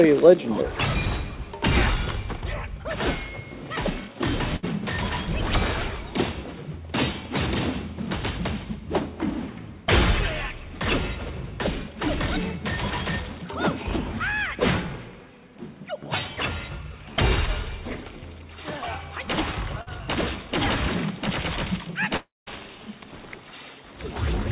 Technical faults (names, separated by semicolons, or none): burst of packet loss; short concealed packet loss; long network dropout